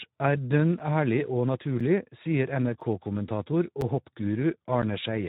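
The Speex codec runs throughout at a low setting. Speech sounds hoarse and noisy, which fits a rate near 11 kbps. Nothing remains above 3.8 kHz. A gap between chunks appears at 0.79, 1.80, 2.81, 3.81 and 4.82 s. Each is a 7 ms hole, repeating every second where the chunks join.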